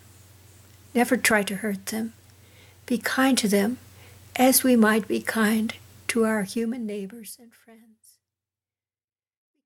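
No technical faults are audible.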